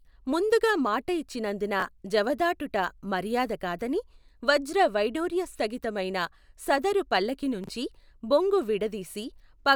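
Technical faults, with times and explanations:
1.80–1.82 s, chunks out of order: after "ముందుగా మాట ఇచ్చినందున", one short block of about 11.6 ms plays one slot late, swapping places with its neighbour. No audio is lost, but the three hard joins create a brief smeared moment before "జవదాటుట మర్యాద కాదని".
7.64–7.69 s, chunks out of order: after "స్థగిత మైన సదరు పల్లకీ", a block plays three slots late. This gives a longer jumbled stretch of about 47 ms.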